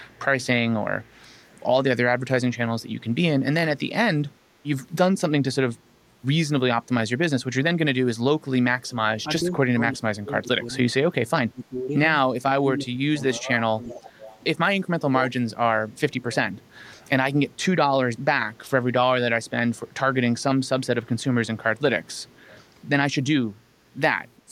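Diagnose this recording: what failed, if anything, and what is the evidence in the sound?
Call processing failed, with an echo leak. A faint delayed copy of the speech, about 0.36 s behind, returns at 0.04, 13.23, 16.34 and 21.05 s. It is strongest near 13.2 to 14.4 s, roughly 20 dB down. The likely cause is a far-end echo canceller passing residual loudspeaker pickup.

Speech is also suppressed in double talk. The level dips at 1.27, 9.14 to 14.04 and 15.0 s. The drops run from roughly 15 to 25 dB, deepest in the long stretch. The echo canceller likely mistook overlapping talk for echo and attenuated everything.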